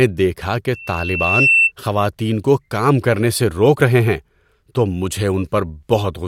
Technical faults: loudspeaker feedback squeal

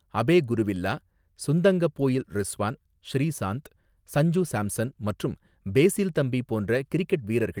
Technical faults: lost packet rebuilt from error correction

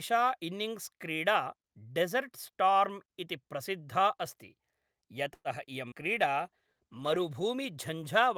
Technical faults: call audio freeze; skip ahead; jitter buffer slow-down; call bitrate drop

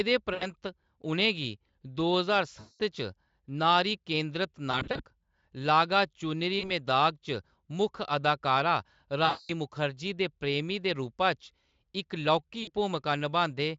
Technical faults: VoIP packet loss concealed by the speech codec

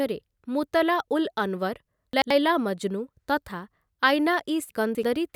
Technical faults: chunks out of order

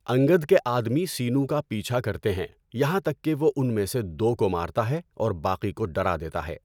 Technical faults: none

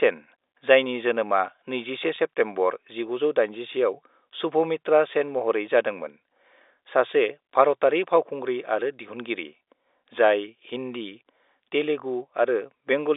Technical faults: packet loss with pitch repetition

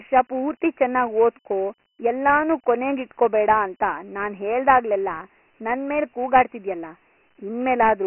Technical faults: Dialogic VOX ADPCM

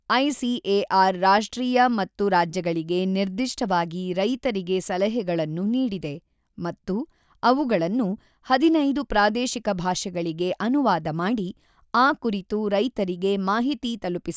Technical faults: none

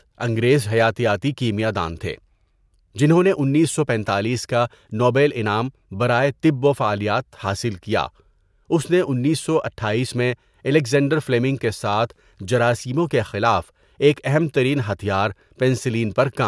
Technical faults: none

